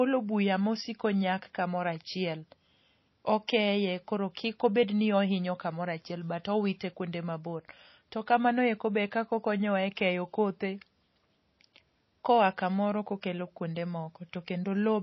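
From the start, the speech has MP3 compression damage that is plainly audible. Nothing reaches above 5.8 kHz, and the sibilants turn watery and swirly, with metallic chirps. The likely cause is an MP3 encoder starved of bits, which fits a bitrate around 24 kbps: it cut the treble at a fixed point and let weak frequency lines flicker on and off between frames. On a spectrogram this shows as a hard, flat ceiling at 5.8 kHz, with patchy, blocky holes beneath it.

At 3.47 s, just before "koro kik obed ni", there is pre-echo: a brief hiss of about 11 ms ahead of a sharp onset, which then sounds softened. The attack landed late in a transform block, so quantisation noise sized for the loud part also filled the quiet moment before it. A spectrogram shows a broadband smear leading the onset, and the waveform shows low-level fuzz where there should be near-silence.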